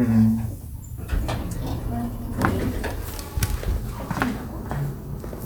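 No technical faults can be heard in this recording.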